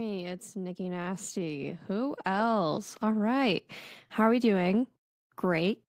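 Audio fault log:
0.53–2.96 s, automatic gain rising. The level climbs steadily by about 10 dB over roughly two and a half seconds. The gain control judged the input too quiet and turned itself up. Speech and background noise swell together.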